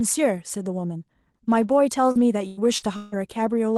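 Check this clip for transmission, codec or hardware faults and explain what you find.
There is one transmission fault, heard while the speech passes through an Opus call path that otherwise carries it cleanly.

Repeated packet loss (robotic sound), 2.11 to 3.14 s: four gaps, the longest 155 ms, each patched by stretching the previous sound, so about a third of that second sounds buzzy and robotic. Unlike a single dropout, the holes recur in quick succession.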